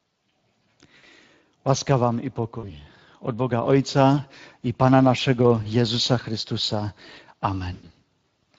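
Speex codec damage runs through the whole recording. It is plainly audible as a hoarse, noisy texture, which fits a bitrate around 20 kbps. The CELP coder's coarse excitation smears fine harmonic detail, so a spectrogram shows fuzzy, grainy harmonics rather than clean striations.

VoIP packet loss concealed by the speech codec strikes at 0.97–1.05, 2.59–2.73, 5.63–5.66 and 7.73–7.91 s, with 60, 40, 20 and 100 ms of audio missing. The decoder repeats its last pitch and filter, giving a buzzy or noisy, fading smear. That shows as flat, repeated harmonics or noise and a decaying waveform envelope.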